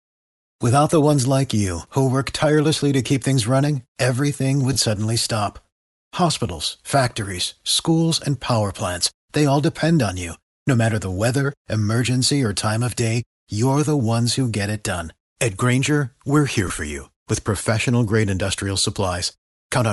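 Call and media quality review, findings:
Breathy, grainy edge on speech throughout, upper band thinned and filled with hiss. Likely Bluetooth LC3 compression: transform codec discarding high-frequency detail and substituting noise. Damage plainly audible, which fits a rate around 48 kbps and 10 ms frames.

Short noisy smear at 4.73 to 4.77 s, between "keep things running everything" and "suddenly stop". Lost LE Audio frames, 30 ms: decoder repeating the last spectrum with randomised phase, consistent with three 10 ms frames.

Same brief smear at 16.68 to 16.70 s, after "we're here", before "for you with professional". Lost LE Audio frames, 20 ms, concealed by reused spectrum, fitting two frames.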